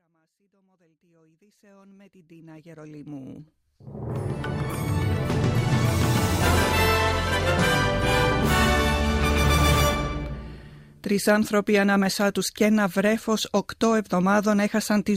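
Nothing stood out on listening beyond a smooth fade-in from the very beginning that reaches full level at about 4.64 s.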